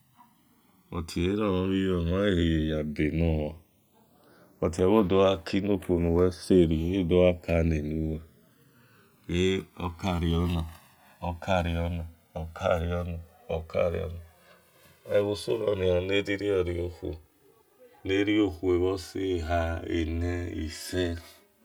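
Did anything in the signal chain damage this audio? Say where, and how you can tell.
Yes. Slow flanging sweeps the speech throughout: channels drifting apart at the converters, separate clocks roughly 200 ppm off sliding the inter-channel delay to a few milliseconds.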